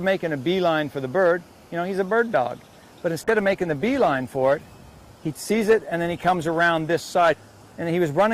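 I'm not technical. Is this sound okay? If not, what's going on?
No. From 3.25 s to about 8.21 s there is a call bitrate drop. The connection's estimated capacity fell, so the sound had to be squeezed into far fewer bits. It becomes rougher and less detailed, worst for about 3.1 seconds.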